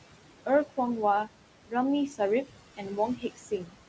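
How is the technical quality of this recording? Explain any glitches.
The recording has two problems, both caused by the noise suppressor in the call path.

Noise suppressor artifacts run through the whole clip. The suppressor treats steady background sound as noise and pulls those bands down by about 17 dB, frame by frame. The room noise, which sits about 13 dB below the speech, sinks away in the gaps and returns under the voice. All of this sits within a band that stops at 8 kHz, which fits a wideband call codec such as G.722.

The suppressor also cuts into the speech itself, from 3.17 to 3.76 s near the end of the clip. Here it misjudges part of the speech as background and turns it down along with the noise, by about 16 dB at the deepest point. Around 300 ms of that stretch is affected in total. Those parts sound swallowed and faint.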